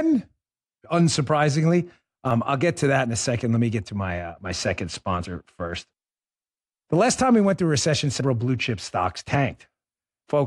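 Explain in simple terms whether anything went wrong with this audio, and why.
Yes, there are two skips in this speech. At 2.31 s, just before "I'll get to that", and at 8.21 s, between "went through a recession" and "blue chip stocks", about a twentieth of a second jumps out. This is audio missing between chunks, likely from recording in 3-second pieces.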